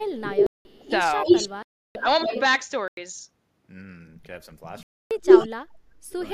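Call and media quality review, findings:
Speech suppressed in double talk, 0.00–0.21 s and 0.81–2.34 s. Talker dips by roughly 25 dB, losing the top end and breaking up in places, about 200 ms affected in the first stretch and roughly half a second in the second. Likely the echo canceller couldn't separate near-end speech from far-end echo while both sides talked and ducked everything. Worth checking the double-talk detector thresholds.

Echo leak, 0.23–2.41 s. A delayed copy of the voice trails by 332 ms at about the same level as the direct speech. It leaks again at 5.27–5.48 s, 341 ms behind and clearly louder than the original. This is likely residual loudspeaker pickup on one side that the canceller didn't remove and sent straight back.

Block of digital silence at 0.46–0.65 s (186 ms, which fits an 8192-sample buffer), 1.63–1.95 s (325 ms), 2.88–2.97 s (93 ms, which fits a 4096-sample block) and 4.83–5.11 s (279 ms). 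Hard cuts to silence with no fade. The output buffer likely isn't being filled in time. Check the audio thread for scheduling stalls.

Background gated by the echo canceller, 5.50–6.03 s. The room tone drops by about 18 dB for roughly half a second while the loudspeaker plays, then comes back when the canceller releases. The suppressor is clamping the mic too hard. Comfort noise or gentler suppression would smooth it over.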